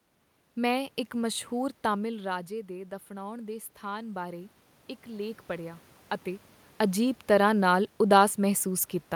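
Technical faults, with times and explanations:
2.02–5.88 s, automatic gain rising: Around 2 s the talker moves away and the voice falls by about 11 dB. The gain control then raises its gain by about 6 dB over nearly four seconds. Voice and room noise swell together.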